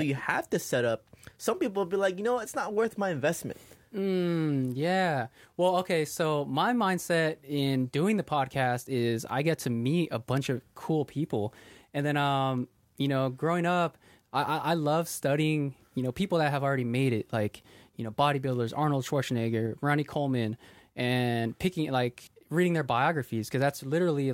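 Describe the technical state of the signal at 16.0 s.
At 16.0 s the speech signal is intact, with no audible fault at that moment.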